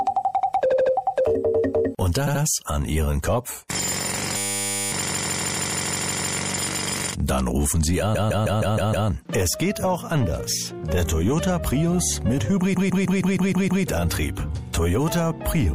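The audio carries watery, swirly treble and smeared attacks throughout, most likely MP3 compression at a low bitrate near 64 kbps. Repeated frames cause stutters where a block of about 78 ms replays at 0.70 and 2.26 s, and a block of about 157 ms replays at 5.08, 8.14 and 12.74 s. From 4.37 to 4.92 s, a system hang loop cycles one 10 ms piece into a steady 100 Hz buzz, about half a second of audio lost. The buzz sets it apart from the slower, audibly repeating stutters.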